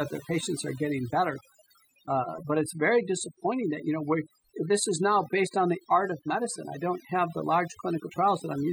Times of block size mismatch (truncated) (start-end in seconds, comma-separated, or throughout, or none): none